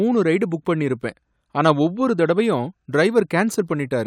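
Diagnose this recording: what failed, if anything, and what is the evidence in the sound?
Nothing failed at any stage of this speech recording.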